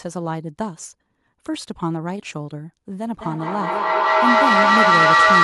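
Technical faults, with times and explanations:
3.21–5.44 s, feedback echo between two devices: the sound returns at a steady interval of about a fifth of a second, each pass thinner and more ringing, and the repeats build until they peak about 10 dB above the speech instead of fading. One device in the room is replaying what the other's microphone sent, and that microphone picks it up again. Neither device's echo canceller removes the other's output. Room reverberation would decay smoothly, not recur at a fixed spacing and grow louder.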